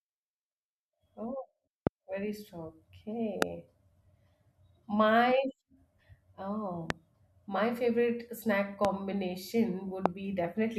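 A speech clip interrupted by five loud pops. Each is a single sharp crack of about 20 ms, and the speech carries on underneath: at 1.87–1.89 s, at 3.42–3.44 s just after "very strong", at 6.90–6.92 s just before "my favorite snack", at 8.85–8.87 s just after "my favorite snack", and at 10.06–10.08 s. They jump roughly 20 to 25 dB above the speech. Each is likely a brief voltage spike from a switch, static discharge or driver glitch entering the signal path.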